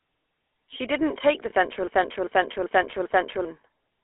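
The whole clip has gone through the GSM full-rate codec. The speech sits inside a narrow phone band of roughly 300 Hz to 3.5 kHz, with nothing up top. It has that familiar buzzy, gravelly grain, because the codec rebuilds the voice from a vocal-tract model fed with sparse, regularly spaced pulses. The damage is plainly audible, and it fits a 13 kbps full-rate GSM link.

At 1.50 to 1.53 s, right after "didn't take the", there's a single lost GSM frame. About 20 ms of audio didn't arrive intact, so the decoder filled the gap by holding the settings of the last good frame. You hear it as a brief rough, metallic ring rather than a clean dropout. It's too short to fade all the way down.

From 1.88 to 3.45 s the audio falls into a broken-record loop. A fragment of about 0.39 s plays four times back to back, identical each pass. Whatever should have followed is simply missing. The likely cause is a stall in the player, encoder or stream, which kept pushing out the last chunk it held until data resumed.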